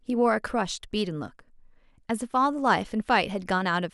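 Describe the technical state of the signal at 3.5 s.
At 3.5 s the speech signal is intact, with no audible technical fault at that moment.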